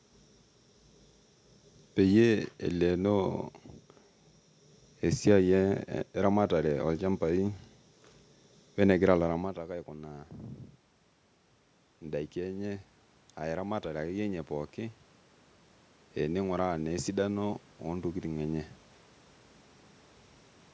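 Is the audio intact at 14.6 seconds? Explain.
No. At 14.6 seconds the automatic gain is rising, in a span from 11.99 to 15.06 s. The input had dropped by about 14 dB, so the gain control slowly added about 5 dB. Voice and room noise swell up together.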